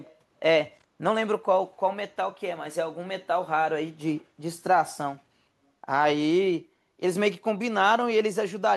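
Speech recording with an echo leak from 0.06 to 0.14 s. An echo canceller on a loudspeaker side likely missed part of its microphone pickup, sending back a very faint copy of the voice, roughly 30 dB down, arriving 349 ms late.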